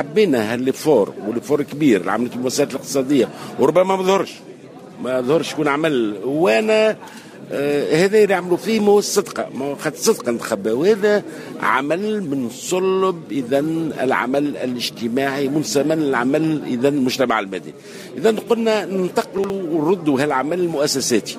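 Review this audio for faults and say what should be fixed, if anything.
A brief jumbled stutter appears between 19.38 and 19.5 s, where two 60 ms pieces of the sound play in the wrong order. This is chunks out of order: one chunk arrived or was written a single chunk late, so it plays after the chunk that should follow it. Nothing is missing, but the swap creates three hard joins, at the start, at the midpoint and at the end of the span. Fix the buffering or write path so that each chunk is placed by its sequence number or timestamp instead of its arrival order.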